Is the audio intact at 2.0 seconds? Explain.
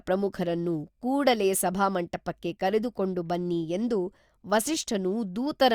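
No. Clock slip clicks run from 0.12 to 5.73 s, so 2.0 s is affected: a single sample slips roughly every 20 ms, likely from two unsynchronised clocks differing by about 1000 ppm, giving a soft, steady rattle over the speech.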